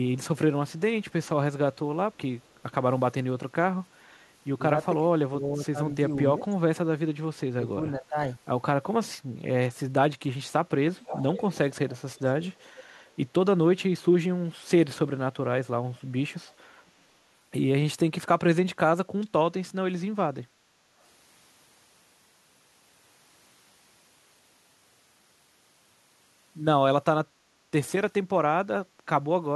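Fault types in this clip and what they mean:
Echo leak: at 2.44, 10.98, 12.14, 13.01 and 16.46 s, a copy of the speech returns 475 ms late. It ranges from barely audible, about 40 dB down, to fairly clear, about 10 dB down at 10.98 s. This is likely a loudspeaker-side echo canceller letting part of its microphone pickup through.
Speech suppressed in double talk: at 5.36–5.77 s and 7.55–8.16 s, the speech dips in patches totalling roughly a fifth and a third of a second. The drops are about 10 dB, then about 20 dB. An echo canceller likely mistook the overlapping talk for echo and attenuated both.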